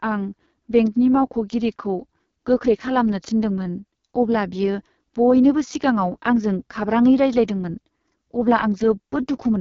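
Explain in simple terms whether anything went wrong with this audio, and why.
Throughout the speech, the AMR wideband (HD Voice) codec has squeezed the sound very hard. It was set near its lowest quality, so voices come out rough and raspy. Nothing above 7 kHz survives, so the highest, crispest sounds are missing.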